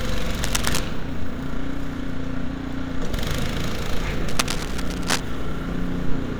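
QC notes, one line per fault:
0.42–0.80 s, cable scratch noise: a dense, uneven burst of scratching and rustling sits over the sound, only a few dB below it. The likely cause is a worn cable, connector or control being moved, so its contact resistance jumps around rapidly and injects irregular noise into the signal.
4.28–5.20 s, cable scratch noise: the same scratchy, rustling texture returns at a similar level and lasts about 0.9 s, likely from a rapidly varying contact.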